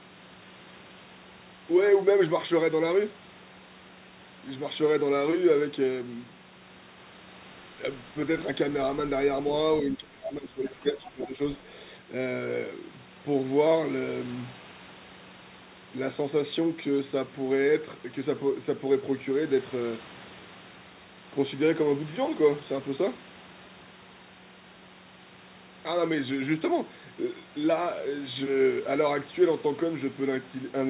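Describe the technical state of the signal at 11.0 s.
At 11.0 s the talker's speech is being pushed down, by up to about 20 dB, somewhere between 9.91 and 11.39 s. That's speech suppressed in double talk, likely from the echo canceller ducking everything while both sides spoke. Right on top of that, from 10.88 to 11.04 s, a faint second voice sits about 20 dB under the speech. That's the other side's voice leaking through, likely loudspeaker echo the canceller didn't fully remove.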